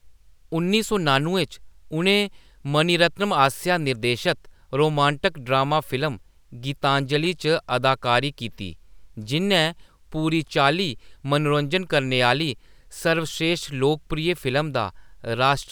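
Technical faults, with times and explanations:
Nothing in this recording stands out as a technical problem; it's a speech clip that comes through without any faults worth flagging.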